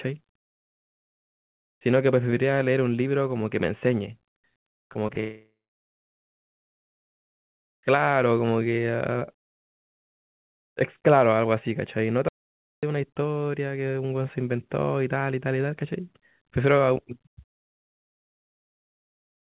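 Between 4.82 and 5.18 s the stream suffers repeated packet loss, giving a robotic sound: short gaps of up to 20 ms keep opening, each patched by stretching the preceding audio, so about 17% of that span is synthetic fill and the sound turns choppy.

From 5.20 to 7.46 s a long network dropout is the likely cause. Nothing arrives for about 2.2 s; the receiver briefly extends the last sound, which decays quickly, leaving roughly 1.9 s of silence before audio resumes with the missing stretch simply gone.

At 12.29 s the input seems to have been lost, most likely an audio dropout to silence, with silence written instead. The sound cuts off abruptly into dead silence with no room tone and returns just as suddenly at 12.83 s, about 0.54 s later. Throughout, the call path's G.711 mu-law band limit leaves nothing above 4 kHz.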